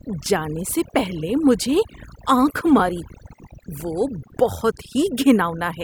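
A speech recording carries overdone noise removal from start to finish. The noise reducer was set far too aggressively, so any frequency band close to its noise estimate gets pushed down or shut off entirely, taking quieter parts of the voice with it. Between phrases the background drops to near silence sprinkled with twinkling specks. On a spectrogram the gaps look nearly black, dotted with isolated bright flecks, while speech energy appears ragged and patchy.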